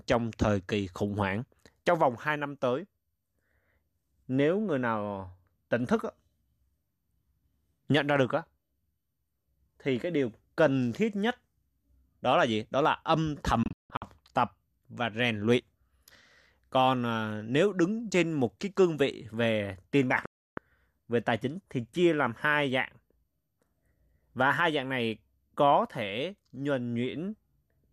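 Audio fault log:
13.63–14.02 s, digital broadcast dropout: the speech drops out in a few short holes rather than one clean gap, about 264 ms missing across a 384 ms stretch, with the longest hole 168 ms. Each cut fades out in just 3 ms, so it's a hard mute. The pattern fits corrupt frames of roughly 24 ms failing their checks.
20.26–20.58 s, digital broadcast dropout: one solid 312 ms silence, same quick 3 ms fade, and that stretch of speech is gone.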